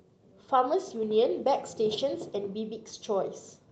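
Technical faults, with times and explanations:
Nothing stood out on listening to this speech, which comes through an Opus call path with its top end limited to about 8 kHz.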